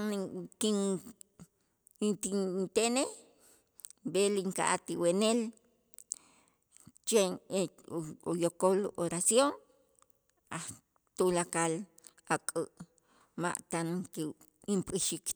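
No technical faults heard.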